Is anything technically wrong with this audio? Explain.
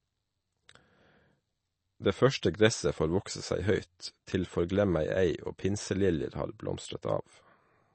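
Yes, two things. Right through the clip the speech has a watery, swirly quality, and nothing comes through above about 8.3 kHz, so sibilants sound dull and a bit metallic. That's most likely MP3 compression at a low bitrate, something in the region of 32 kbps. Short of bits, the encoder chops the treble at a fixed point and drops quieter frequency lines, which flicker in and out from frame to frame. That flicker is the swirl you hear.

There's also a pre-echo at 2.41 s. A short hiss of about 14 ms sneaks in just ahead of a sharp onset, and the attack itself sounds softened. The codec spreads its quantisation noise across a whole block, so when a loud attack lands late in a block, noise sized for that loud part leaks into the quiet moment before it.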